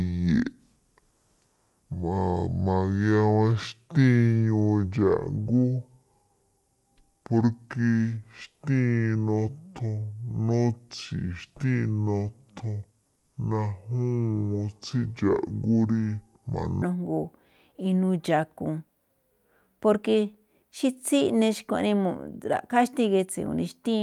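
From the start to 16.82 s the speech comes out deep and dragging, pitched roughly ten semitones low and stretched so that every syllable lingers, then snaps back to its natural pace and register. That opening section at the wrong speed runs at 0.577 times the proper rate, with pitch and tempo falling together as a single playback-clock error. The likely cause is the audio being played or converted against a mismatched sample-rate clock.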